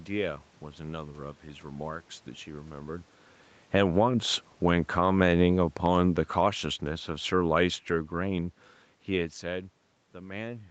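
A speech recording passed through a call path, with room noise in the background and nothing above 8 kHz. The level pumps because of automatic gain control. From 3.6 to 4.02 s there is automatic gain falling. The gain drops about 5 dB and the voice sinks together with its background. Automatic gain rising from 3.93 to 4.43 s lifts everything about 6 dB, swelling over half a second. A longer automatic gain falling follows from 4.63 to 9.45 s. It slowly pulls voice and noise down about 8 dB. Around 3 and 9 s the talker seems to move relative to the microphone.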